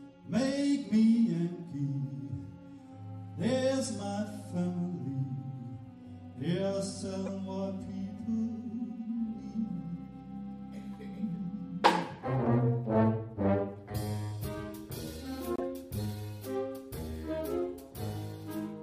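At 7.26 to 7.29 s there is a corrupt frame decoded. Flipped bits reached the decoder, and it played the damaged data anyway. Misread gains and codes put energy at the wrong frequencies. The result is a short glitch lasting about two frame lengths. Its error peaks around -25 dBFS. At 10.77 s a second corrupt frame decoded gives a much fainter glitch, near -45 dBFS. It is very brief and spans about four damaged frames.

From 15.56 to 15.63 s there is a corrupt frame muted. Here the decoder rejected the damaged frames, and the player inserted silence instead. The sound drops out abruptly, leaving a hole of about 74 ms. That length fits three consecutive frames. When the sound returns, it resumes on time, with no shift in timing.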